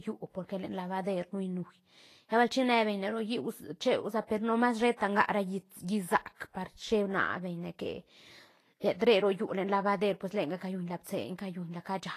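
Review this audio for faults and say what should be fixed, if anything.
The whole clip has a hissy, grainy quality, most likely from Vorbis compression. Nothing is present above 14.2 kHz, so the highest treble is simply missing. The treble that remains sounds coarse. Fine detail has turned into noise of similar loudness. This plainly audible damage points to a low bitrate, around 33 kbps. The encoder's floor-and-residue model runs out of bits for the high bands. To prevent it, encode at a much higher quality setting or keep a lossless master.

Two attacks carry pre-echo. A short hiss runs from 6.35 to 6.40 s, about 55 ms. Another runs from 10.57 to 10.61 s, about 44 ms. In each case the onset sounds softened and smeared. The codec spread its quantisation noise across a whole transform block. That noise was sized for the loud attack, and it leaked into the quiet moment just before it. Higher bitrates or a codec with better block switching would prevent this.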